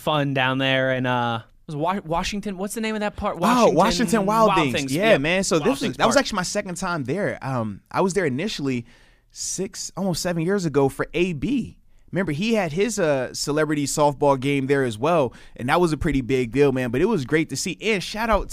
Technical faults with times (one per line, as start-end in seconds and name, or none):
none